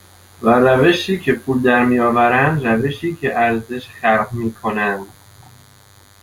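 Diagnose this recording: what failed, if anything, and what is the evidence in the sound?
The analogue side picked up DECT cordless phone buzz for the whole of this speech clip. Under the talking there's a thin, steady buzz at 100 Hz, full of harmonics, sitting around 35 dB below the speech. A DECT handset or base nearby fires a short radio burst every 10 ms, and somewhere in the mic or preamp wiring a junction rectifies that RF into an audible pulse train at the burst rate.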